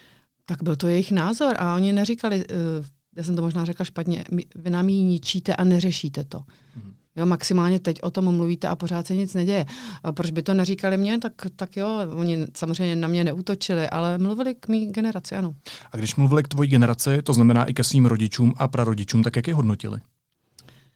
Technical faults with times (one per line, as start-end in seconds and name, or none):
none